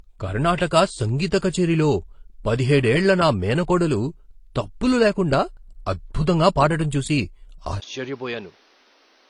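A speech recording carries layered codec smearing from start to finish, likely from transcoding between lossy codecs, consistent with AAC-LC at about 32 kbit/s re-encoded as HE-AAC; a spectrogram shows blocky, smeared upper bands. At 7.8 s a 20 ms gap appears, then the sound turns duller and roughly 10 dB quieter, with nothing above 6.6 kHz and a new noise floor about 30 dB down. This is likely the input switched to a poorer device. On a spectrogram it shows as a sharp ceiling and a raised background, and on the waveform as a smaller envelope.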